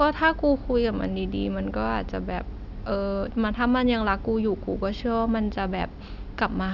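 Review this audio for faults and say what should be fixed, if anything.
No faults turn up in this audio, so nothing needs to be fixed.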